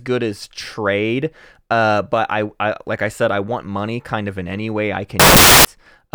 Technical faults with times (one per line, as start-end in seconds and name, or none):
5.20-5.65 samples built from the wrong bytes